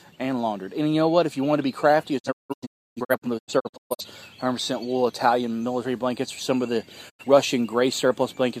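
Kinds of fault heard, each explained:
digital broadcast dropout: The receiver lost the signal or rejected corrupted frames and muted until good ones returned, so the sound fades out over 20 ms into scattered holes from 2.18 to 4.05 s, longest 0.3 s, then briefly again from 7.08 to 7.25 s.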